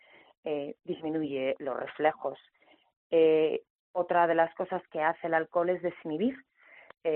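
Nothing in the audio stood out as a technical problem on listening.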